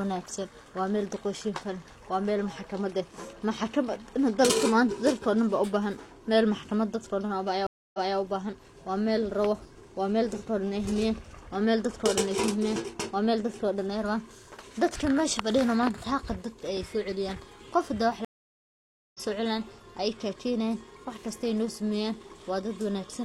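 Stream reconnects occur at 7.67 s and 18.25 s. Each time the connection dropped, playback stopped, and the player rejoined the stream with a fresh decoder. At 7.67 to 8.17 s, about 0.27 s of silence is followed by speech resuming 0.23 s earlier, so a short stretch repeats. At 18.25 to 19.20 s, a 0.9 s gap ends with the speech jumping ahead, losing roughly 0.7 s.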